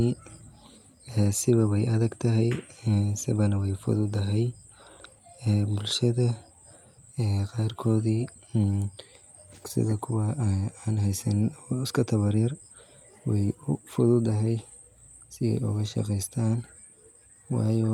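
No technical faults are audible.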